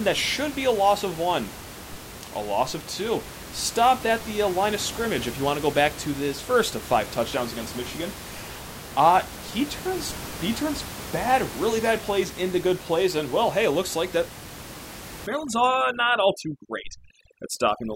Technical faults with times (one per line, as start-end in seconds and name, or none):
15.27-17.96 overdone noise removal